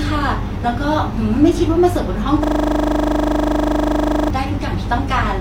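From 2.44 to 4.30 s, a system hang loop: the stalled driver replays one 40 ms buffer as a 25 Hz buzz. Waveform blocks repeat identically, and the spectrogram shows evenly spaced stripes.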